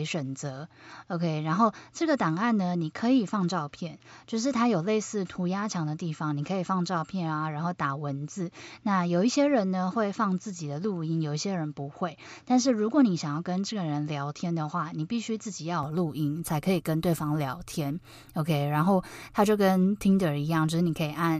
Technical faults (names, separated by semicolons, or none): input switched to a poorer device